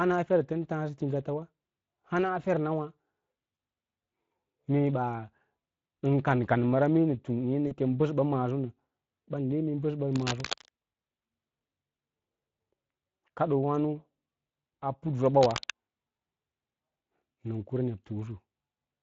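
Throughout the speech, Speex codec damage is plainly audible: the CELP coder leaves the voice hoarse and grainy, with a noise-like texture where fine excitation detail is missing. The degree of damage fits a setting of about 20 kbps.

At 3.55 to 3.57 s and again at 7.67 to 7.76 s, VoIP packet loss concealed by the speech codec appears. The decoder extrapolates from the last pitch and filter state, so the sound briefly smears into a buzzy tone or coloured noise that fades. The first gap fits one lost 20 ms frame, the second two frames, and the voice stays weak or distorted after each.

From 10.13 to 10.70 s and from 15.43 to 15.70 s, cable scratch noise appears as dense, uneven scratching bursts only a few dB below the speech. The likely cause is a worn cable or connector being moved, changing its contact resistance.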